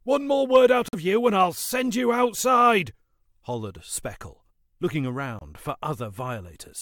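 At 0.88 s the sound drops out abruptly for about 66 ms, until 0.95 s. At 5.39 s a shorter gap of about 24 ms follows. Both are corrupt frame muted faults. Damaged bits made the decoder reject compressed frames, and the player filled the space with silence. The first hole points to two lost frames, the second to one. The cut starts without any fade. Timing stays intact, and the audio resumes in place.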